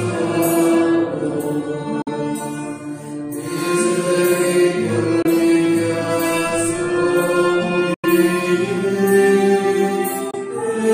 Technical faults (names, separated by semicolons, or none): Bluetooth dropout